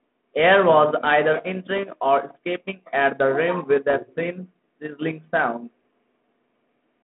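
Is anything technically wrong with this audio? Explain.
Yes. There are bit errors on an ADPCM link, at 1.78 s and from 3.90 to 3.95 s. The audio travels as 32 kbit/s G.726 ADPCM, band-limited to about 150 Hz to 3.5 kHz. A small share of bits, around one in a thousand, arrive flipped. Each bad bit also corrupts the decoder's step size and prediction, so the error rings on briefly. The result is pops and rough bursts with brief changes in level at 1.78 s and near 3.9 s.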